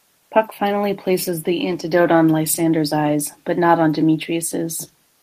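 Nothing stood out on listening to the speech in this recording.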